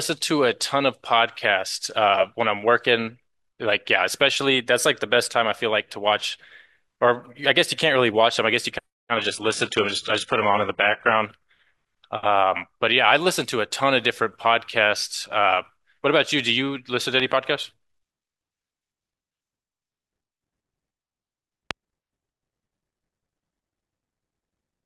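From 9.17 to 11.17 s, the connection slowed and the adaptive stream at a lower bitrate took over. The change sounds like a drop from a clean AAC stream near 96 kbit/s to a parametric HE-AAC stream around 12 kbit/s. The speech turns dull, with nothing above 11.1 kHz and the upper treble rebuilt rather than carried. Quality falls and returns abruptly at both edges, with no gap in the sound.

A voltage transient, likely from a plug, switch or static discharge, entered the signal twice. From 17.20 to 17.34 s, two loud pops follow in quick succession, peaking roughly 10 dB above the speech. From 21.71 to 21.73 s, a single loud pop stands about 20 dB over it. Each lands on top of the speech as a brief thump, and the speech runs on unbroken beneath.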